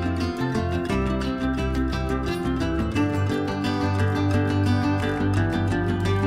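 No technical faults can be heard anywhere in the audio.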